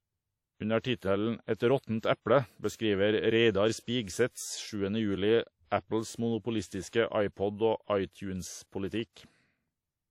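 Throughout, the speech rings and washes, with breathing hiss and nothing above 16.2 kHz: likely WMA compression smearing quantisation noise, as fits a 48 kbps bitrate.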